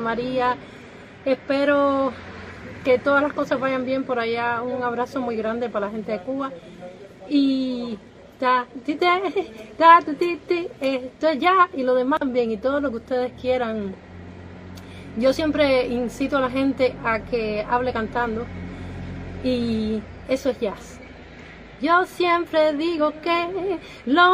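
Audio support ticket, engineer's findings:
Damaged data in a compressed stream at 12.17 to 12.22 s: a brief glitch of about 50 ms. Probable component is the decoder reading corrupt frames and resyncing to the next header.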